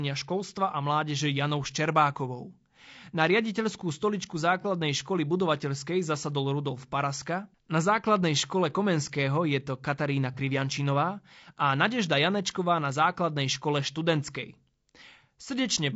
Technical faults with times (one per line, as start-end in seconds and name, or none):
0.00-15.96 low-delay AAC compression
4.61-4.65 AAC frame loss with concealment
10.34-10.39 AAC frame loss with concealment